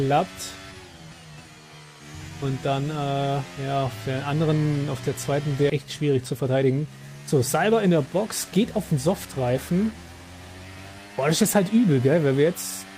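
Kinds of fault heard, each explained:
Skip ahead: Around 5.7 s the sound jumps abruptly forward, about a second missing and its two sides joined with no gap, as a stretch of audio was dropped.
Jitter buffer speed-up: From 6.32 to 6.87 s and 7.71 to 8.25 s the sound runs hurried at unchanged pitch, as short pitch-period pieces were trimmed to shrink buffered delay.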